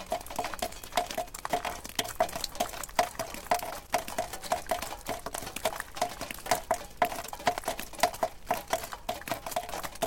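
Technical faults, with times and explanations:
0.67 to 0.93 s and 3.84 to 3.88 s, loose connector crackle: in two separate bursts, the first about 0.27 s long and the second about 50 ms, the sound is chopped by a worn or dirty contact that rapidly makes and breaks as it shifts, giving an irregular crackling scratch over the everyday sounds. A spectrogram would show clusters of thin vertical broadband streaks, and the waveform would show abrupt dropouts and jagged steps.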